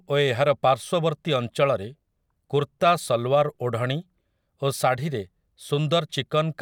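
No technical faults are audible anywhere in the recording.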